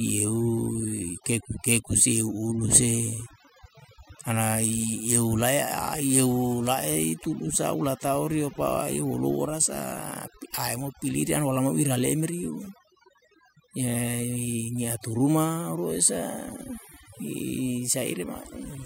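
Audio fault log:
Throughout: overdone noise removal. The background between phrases drops and is scattered with twinkling, chirpy specks. A noise reduction stage set far too aggressively is shutting off individual frequency bands near its noise estimate, taking the quieter parts of the voice with them.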